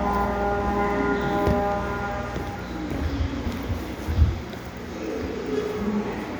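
Everyday sounds make up this recording, and no technical fault can be heard anywhere in it. The audio holds together throughout with nothing that needs a time or a cause.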